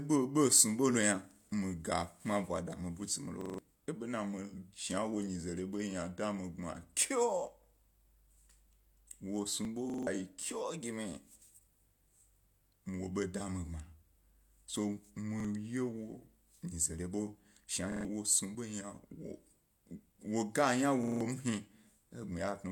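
Right after "mi butsi mi lo", from 3.41 to 3.58 s, a repeated buffer plays the same 43 ms slice four extra times with hard joins. Late audio forced a replay, which fits a 2048-sample buffer and costs about 150 ms of speech. At 9.65 s there is a small jump forward with no gap, likely a dropped buffer (overrun) losing roughly 20 ms. Unlike the stutters, nothing repeats here; the audio just skips. Repeated-buffer stutters recur at 9.90 to 10.07 s (four repeats), 15.40 to 15.45 s (one repeat) and 17.92 to 18.05 s (three repeats). Another skip follows at 18.55 s, roughly 30 ms lost. A final stutter falls at 21.04 to 21.21 s with four repeats.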